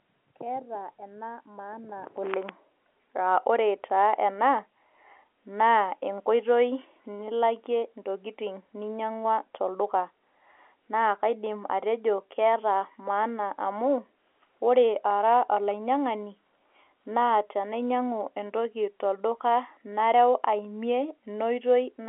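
No technical faults can be heard in this speech.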